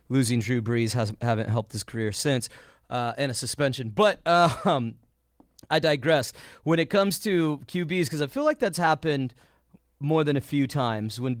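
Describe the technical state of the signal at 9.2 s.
At 9.2 s the speech is intact, with no dropout, glitch or other fault, and it carries only the light coding of the Opus voice compression running in its fullband hybrid mode at 24 kbps.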